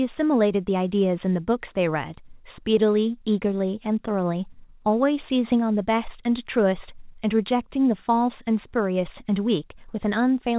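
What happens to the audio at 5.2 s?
Nothing goes wrong at 5.2 s: the speech carries straight through that moment with no dropout, glitch or distortion, only the narrowband sound of the call path, which has nothing above 4 kHz.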